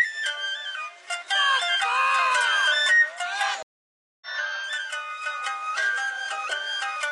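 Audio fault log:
3.63 to 4.27 s, stream reconnect: the connection dropped, leaving about 590 ms of silence, then a fresh decoder picked up the stream roughly 0.7 s later.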